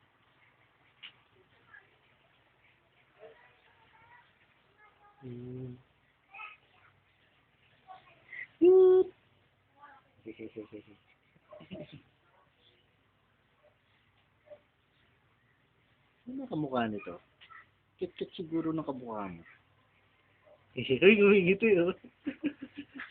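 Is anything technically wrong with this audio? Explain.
No, nothing is technically wrong with this audio.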